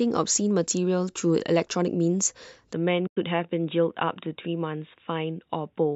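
At 2.73 s the speech abruptly turns duller and slightly quieter, by about 5 dB, with no gap at the change. This is most likely an input switched to a poorer device. From there to the end, a spectrogram shows nothing above 3.8 kHz, and a faint new noise floor sits far below the speech.

From 3.07 to 3.17 s comes AAC frame loss with muting: about 100 ms of audio vanishes into a soft-edged hole, a run of lost frames the decoder replaced with silence. The waveform tapers smoothly to silence and back, leaving a clean vertical blank on the spectrogram.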